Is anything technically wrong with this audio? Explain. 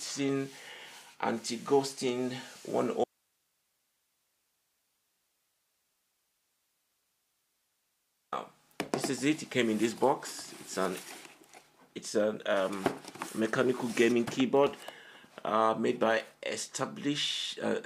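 Yes. From 3.04 to 8.32 s there's an audio dropout to a faint residue: the sound cuts abruptly for about 5.3 seconds, leaving only hiss roughly 45 dB below the signal. It's likely a lost feed with the downstream path still live, not a fade or pause.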